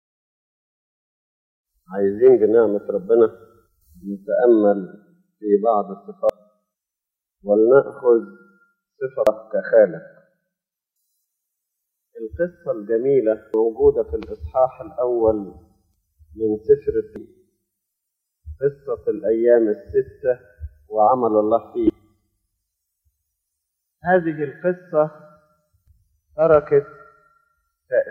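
Damaged data in a compressed stream appears at 6.30, 9.27, 13.54 and 17.16 s, then as a longer stretch from 21.53 to 21.90 s. Corrupted bytes make the decoder misread frames and lose sync while it hunts for the next valid header, producing brief chirps or squawks.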